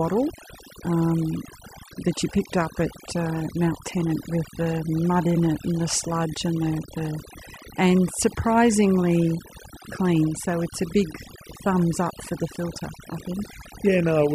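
Overdone noise removal runs through the whole speech clip. The noise reduction was pushed so hard that any frequency band sitting close to its noise estimate gets pulled way down, softer parts of the voice included, so the background drops and breaks up into little twinkling specks.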